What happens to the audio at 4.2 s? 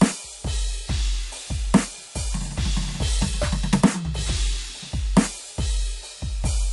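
At 4.2 s the music carries the same fault heard across the whole clip, most likely MP3 compression at a low bitrate, with damage that fits roughly 48 kbps. Short of bits, the encoder cuts everything above 11.3 kHz and drops weaker frequency lines, which flicker on and off between frames. The result at that moment, as throughout, is dull music lacking its top treble, with a watery, swirling texture, metallic chirps on bright sounds and softened attacks.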